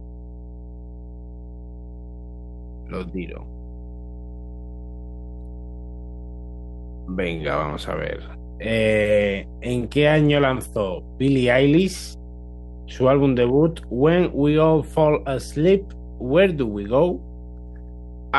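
Mains hum throughout this speech: a steady 60 Hz tone roughly 15 dB below the signal, power-line energy coupled through a ground loop or transformer.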